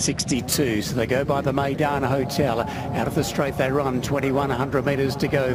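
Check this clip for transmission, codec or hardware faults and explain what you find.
There is one fault. From 0.36 s to the end, a bright, metallic fizz rides above the sound, about 22 dB below it. It rises and falls with the sound's level, and its lowest band, from 12 to 24 kHz, moves opposite to the pitch. This is imaging from sample-and-hold upsampling. Each sample was repeated to reach a higher rate, apparently 24 kHz raised to 44.1 kHz, with no smoothing filter, so mirrored copies of the spectrum remain.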